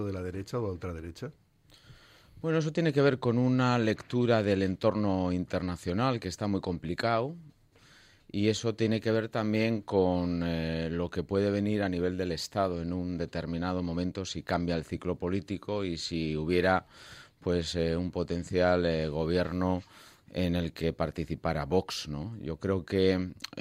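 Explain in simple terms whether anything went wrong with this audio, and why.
Nothing went wrong with this audio that a careful listener can pick out. No moment in it stands out as a technical problem, so there is nothing here that needs explaining or fixing.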